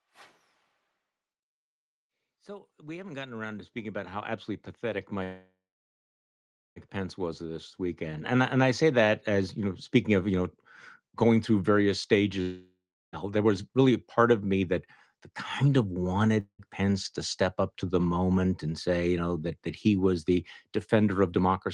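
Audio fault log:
2.26–9.87 s, automatic gain rising: the level climbs steadily by about 18 dB over roughly seven and a half seconds, with voice and background swelling together. The gain control judged the input too quiet and raised its gain gradually instead of in one step.
5.23–6.79 s, call audio freeze: the last sound is drawn out as a fading buzz or hiss that sinks into about 1.21 s of silence, 1.53 s filled in all, then speech resumes where it stopped, losing nothing but now 1.53 s later. Likely packets were held up and the jitter buffer ran empty.
12.41–13.16 s and 16.40–16.62 s, long network dropout: after "going through various" the sound decays into about 0.36 s of silence within a 0.71 s fill, and 0.72 s of speech never returns. After "kind of" a 0.18 s fill with 0.09 s of silence replaces 0.3 s of lost speech, leaving the stream roughly 100 ms less delayed. Likely no audio arrived over those stretches.
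13.25–15.32 s and 21.24–21.68 s, jitter buffer speed-up: speech runs at 107% up to "kind of", with around 150 ms cut, then at 110% near the end, with about 50 ms cut, sounding hurried at unchanged pitch. The buffer trimmed many short pitch-period pieces to shed excess delay.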